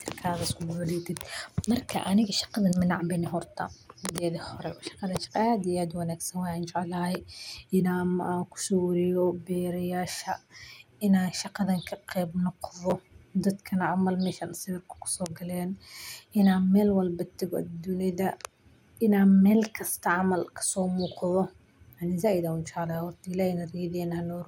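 Chunks out of order at 12.90 to 12.92 s: a 10 ms chunk of the speech arrived one chunk late, so it plays after the chunk that should have followed it. No audio is lost, but the two 10 ms pieces swap places, leaving three hard joins within about 20 ms where the waveform jumps instead of continuing. The result is a brief garbled, jumbled moment.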